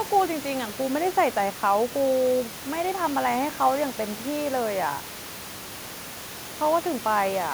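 Nothing is technically wrong with this speech recording; the steady room noise sits about 16 dB below the speech and belongs to the recording space.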